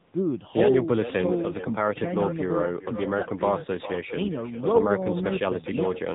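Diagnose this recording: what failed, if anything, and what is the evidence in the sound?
Echo with no canceller, throughout, in call processing: every phrase returns roughly 0.4 s later, about 11 dB down and thinner, as the far loudspeaker feeds its microphone unchecked.

AMR narrowband mobile codec, throughout: nothing passes above 3.8 kHz and the speech sounds buzzy and synthetic, which fits a low AMR-NB mode near 8 kbps.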